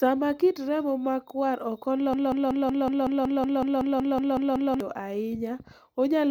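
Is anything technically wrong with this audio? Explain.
Yes. From 2.14 s to 4.80 s, just after "kit remo makwar", there is a broken-record loop: a piece of sound about 0.19 s long plays 14 times back to back. The likely cause is a stalled player or stream that kept resending the last fragment it held, so the speech that belonged in those seconds is lost. Unlike an echo, each repeat is identical and full-level, with no decay. Unlike a dropout, the sound never goes silent.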